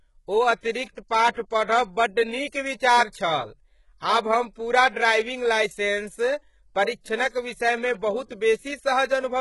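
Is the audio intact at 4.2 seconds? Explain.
No. At 4.2 seconds, as throughout the whole clip, the speech carries heavy codec damage that is likely HE-AAC compression. Nothing is left above about 11.4 kHz, and the treble just below that sounds synthetic: gritty, metallic s sounds that don't blend with the body of the voice. That comes from spectral band replication, which copies lower bands upward under a coarse envelope, fitting a very low bitrate near 12 kbps. A simple low-pass would sound dull instead.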